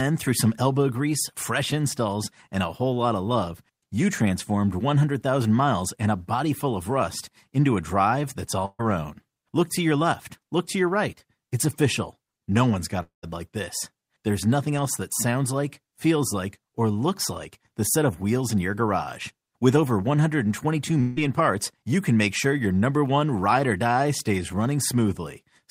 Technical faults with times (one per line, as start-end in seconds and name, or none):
8.65-8.81 burst of packet loss
13.03-13.25 long network dropout
21.01-21.18 long network dropout